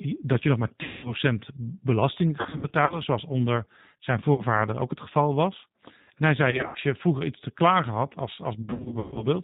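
This speech clip is carried by the G.729 codec at 8 kbit/s, and its damage is plainly audible throughout: nothing above 4 kHz survives, and the pulse-based excitation gives the voice a rough, slightly synthetic texture. VoIP packet loss concealed by the speech codec occurs at 0.83–1.14 s (200 ms lost), 2.41–2.99 s (200 ms scattered over 480 ms), 4.34–4.44 s just before "ook het geval was", 6.51–6.79 s before "je vroeger iets te", and 8.62–9.27 s after "te klagen had als". In each gap the decoder repeats its last pitch and filter state at falling gain, producing buzzy or noisy, fading stretches that stay weak after packets resume.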